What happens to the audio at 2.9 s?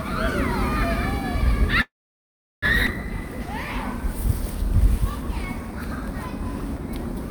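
A skip ahead occurs between 2.86 and 2.90 s. Playback jumps forward past roughly 0.7 s of audio that never reaches the listener, and the delay drops by around half a second. This points to a jitter buffer that overflowed and discarded a backlog while later audio was already queued. Only about 10 ms of fill bridges the join, so the sound before and after the jump butts together almost directly, giving an abrupt lurch forward rather than a pause.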